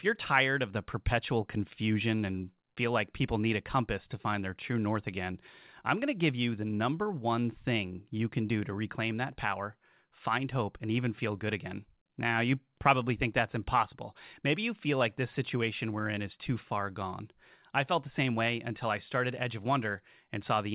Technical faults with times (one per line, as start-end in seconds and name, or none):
none